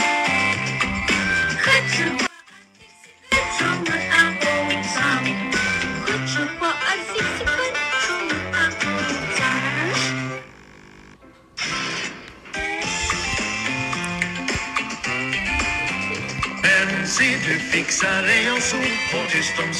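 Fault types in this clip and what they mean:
One channel inverted: From 2.27 to 3.32 s the sound drops by about 28 dB and then returns. Likely cause: one stereo channel with reversed polarity, so the material common to both channels cancels when they are summed to mono. Only the small difference between the channels remains, a faint residue rather than true silence. That residue is what separates this from a dropout or a mute.
Compressed frames skipped: At 16.63 s and at 19.25 s the audio jumps forward instead of pausing. Whole coded frames were never played, either because they were missing or because the decoder rejected them, and the playback picks up further ahead. The first jump loses about 100 ms, which fits roughly four frames of 23.2 ms. The second loses about 70 ms, roughly three frames. A dropout leaves a gap in time, but here the material is simply missing at the join.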